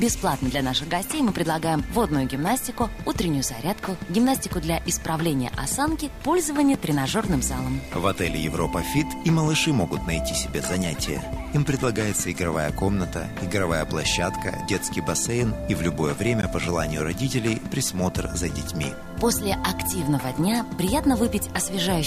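A display or video cable is coupling into the audio path, adding a video or display buzz at a 75 Hz field rate with hash above it, sitting well below the sound throughout. Twice the output buffer was apparently not filled in time, leaving a block of digital silence with hard edges: a tick at 6.74 s (2.2 ms) and a short hole at 16.42 s (15 ms).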